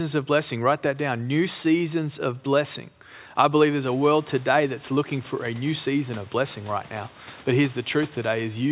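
No technical fault can be heard in the speech; the narrowband sound with nothing above 4 kHz fits a G.711 A-law call path at 64 kbps, and the room noise that rises by about 17 dB around four seconds in stays about 29 dB below the voice.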